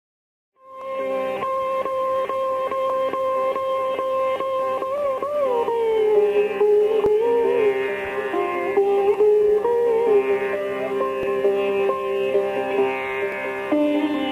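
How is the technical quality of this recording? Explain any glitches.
The recording is marred by one recurring glitch, clock drift buffer slips: a regular click or pop from 0.81 s to 13.32 s, repeating every 2.09 s, about seven in all. These clicks likely come from two devices in the chain running on separate clocks that disagree by something on the order of 700 parts per million. The buffer between them slowly drifts until a small block of samples, around 70, is dropped or repeated, producing a brief discontinuity. The first click falls within the smooth fade-in that rises to full level by 1.35 s.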